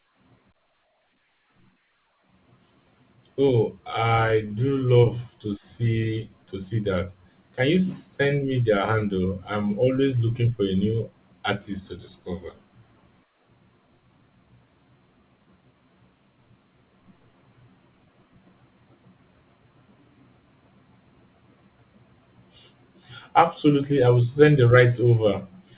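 At 4.46 s the speech briefly hangs: for a few hundredths of a second, until 4.52 s, the sound is held in place with a faint buzzy sustain before carrying on from exactly where it left off. This is a short stall from a late packet. A packet missed its playout time, the jitter buffer ran dry, and the receiver stretched the last sound by about 38 ms to cover the gap. Nothing is lost, but playback runs 38 ms later from then on. The band-limited sound, with nothing above 4 kHz, comes from the telephone-grade G.711 A-law call codec.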